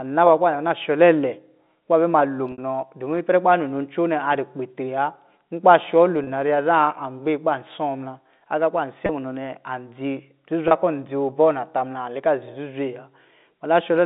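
A brief held, buzzy tone bridges the speech at 2.52–2.58 s, just after "bɛ ma lo", then at 6.24–6.27, 9.06–9.09 and 10.68–10.71 s. This is packet loss with pitch repetition, in which the receiver repeats the last pitch period to fill each gap. The first gap is 60 ms, which fits two lost packets. The others are 30 ms each, which fits one packet apiece. All of this sits on a telephone-band G.711 line.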